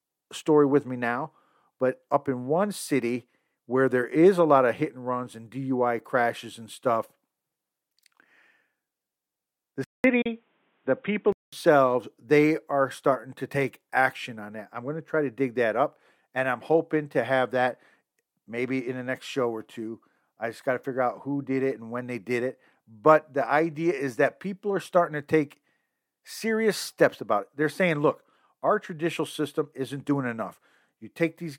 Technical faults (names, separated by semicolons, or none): input switched to a poorer device; digital broadcast dropout